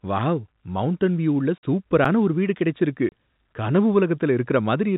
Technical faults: packet loss filled with silence; underrun with held sample

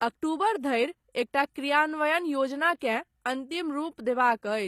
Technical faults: HE-AAC compression

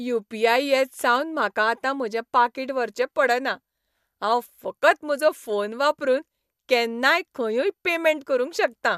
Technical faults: none

